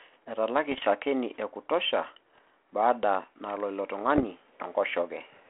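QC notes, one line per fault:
0.71 to 0.87 s, 2.35 to 2.47 s and 4.06 to 4.25 s: bit errors on an ADPCM link. You get short crackly pops and rough, gritty bursts with little level jumps. The second lands just before "baada nalo" and the third right after it. A small scatter of flipped bits, well under 1%, knocks the decoder's step size and predictor off track, so each hit smears on for a few milliseconds instead of clicking once. It all sits in a narrow phone band that fits a 32 kbit/s G.726 link.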